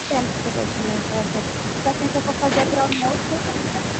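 Between 1.83 and 2.41 s the voice dips in short bites, adding up to roughly a tenth of a second, with the deepest drop around 10 dB. That's the pattern of speech suppressed in double talk. It's likely the far end was talking at the same moment, and the echo canceller couldn't tell this talker apart from the loudspeaker echo, so it pulled both down. You hear the voice duck and thin out in patches rather than one clean gap.

Right after, from 2.50 to 2.71 s, a delayed copy of the voice comes back about 211 ms late, sitting only a few dB under the direct speech, roughly 5 dB down. That's an echo leak. The likely cause is a speakerphone on the other side whose canceller let part of its mic pickup through. At that level and delay it reads as a distinct repeat, and the whole call path tops out near 8 kHz.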